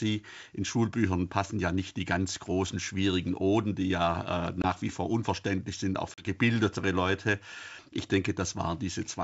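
Packet loss on an ADPCM call hits twice. At 4.62 s a 20 ms hole opens, about one packet. At 6.14 s a 40 ms gap, about two packets, leaves disturbance until 6.27 s. Each gap is silent. The decoder's predictor and step size lose sync with the sender's, so the sound returns slightly distorted and settles within tens of milliseconds.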